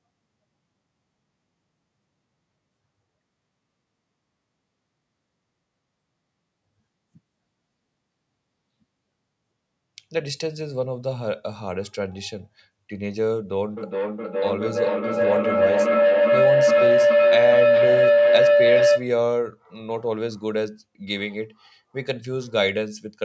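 A speech recording carrying a feedback howl from 13.77 to 19.12 s: a tone around 500 Hz swells to about 7 dB above the voice, repeating roughly every 400 ms. A second device in the room re-captured its own output, and each trip round that loop added level. The call's processing also leaves nothing above 8 kHz, which is normal.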